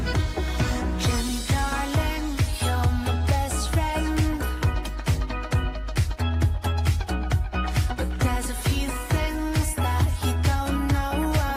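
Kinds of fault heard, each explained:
Nothing stood out on listening; the audio held steady with no audible disturbance at any point.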